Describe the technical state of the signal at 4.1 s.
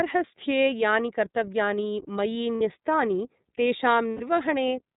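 Right at 4.11 s there's a run of lost iLBC frames until 4.21 s. The decoder fills those 90 ms by repeating the last pitch cycle with noise, so it sounds like a held, buzzy vowel, which fits three 30 ms frames going missing. Underneath, the iLBC codec itself is plainly audible: narrowband with nothing above 4 kHz, and a slightly rough, synthetic edge from its frame-by-frame excitation coding at about 13 kbps.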